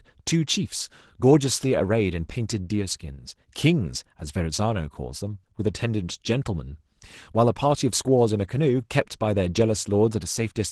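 Opus voice compression runs throughout. The speech sounds hoarse and slightly robotic, which fits a hybrid coder working near 16 kbps with coarsely coded excitation.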